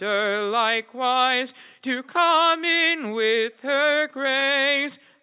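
A short concealed packet loss falls between 4.40 and 4.44 s, where roughly 20 ms of the signal never arrived and the receiver bridged the gap by extending the preceding sound before blending back into the real audio. It comes across as a brief smear or wobble rather than a hard silent dropout or a sharp digital click, because the gap is filled instead of muted. The audio is band-limited with nothing above 4 kHz, consistent with a G.711 mu-law call path at 64 kbps.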